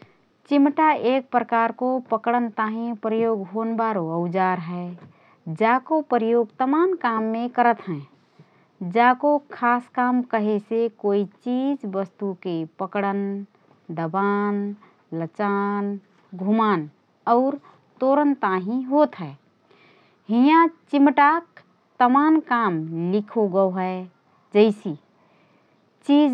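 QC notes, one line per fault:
No fault to note in this speech.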